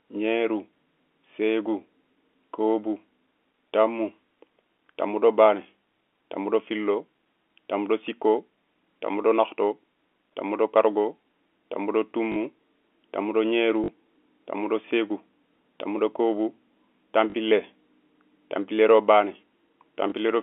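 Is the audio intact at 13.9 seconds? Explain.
No. From 13.84 to 13.88 s there is a brief robotic stutter with a buzz. This is packet loss with the last packet repeated: about 40 ms of audio went missing, which fits two lost 20 ms packets, and the receiver replayed the last good packet in their place.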